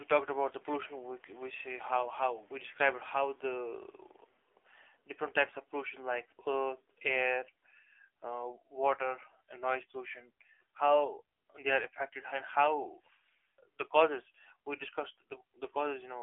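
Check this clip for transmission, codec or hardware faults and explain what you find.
One codec fault runs through the whole clip. AMR narrowband mobile codec: vocal-tract modelling leaves buzzy, synthetic speech confined to about 300 Hz to 3.4 kHz, nothing above 3.5 kHz, which fits a low mode near 7.4 kbps.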